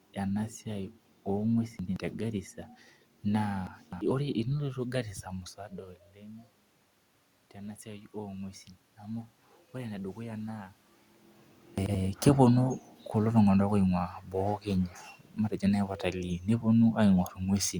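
At 1.79 to 1.96 s and again at 11.78 to 11.95 s, an 85 ms chunk of audio was delivered one chunk late, so chunks out of order. Each section briefly scrambles. At 3.67 to 4.01 s a chunk arrived three chunks late, producing a longer jumbled stretch. From 7.53 to 10.79 s the input had dropped by about 15 dB, and the automatic gain rising response slowly lifted the level by about 4 dB. The voice and room noise swell together over those three seconds.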